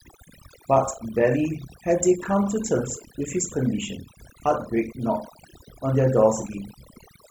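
Speech runs through the whole clip with overdone noise removal applied from start to finish. The background is pulled down but left with twinkling, chirpy specks, because individual frequency bands sitting close to the estimated noise floor are cut hard, taking quieter parts of the voice with them. Unlike a noise gate, which opens and shuts the whole signal at once, this acts band by band and continuously.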